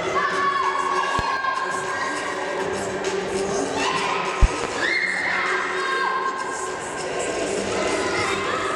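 At 1.19 to 1.22 s a loud pop, likely a voltage pulse from a plug, switch or static, hits roughly 20 dB above the sound, which continues underneath. At 1.37 to 1.44 s one channel drops out, likely a lost stereo feed, so the mono sum falls abruptly by about 6 dB before recovering. At 4.43 to 4.67 s a second loud pop arrives as two quick thumps, again roughly 20 dB above the sound and likely from a similar electrical pulse.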